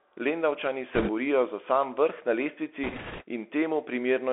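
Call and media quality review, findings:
Bluetooth CVSD headset codec, whole clip: narrowband headset path, delta modulation consistent with 64 kbps CVSD, one bit per sample with adaptive step. Speech band limited to roughly 300 Hz to 3.4 kHz; fast loud peaks outrun the step, giving scratchy sibilants and granular hiss underneath.

Bit errors on a Bluetooth voice link, 0.94 to 1.10 s (ending just before "borijo za sam vrh") and 2.84 to 3.23 s: flipped bits on the CVSD stream at an error rate of a few percent. Each bit carries little weight and errors decay, so no sharp clicks, just a rushing, crackly noise riding over the speech.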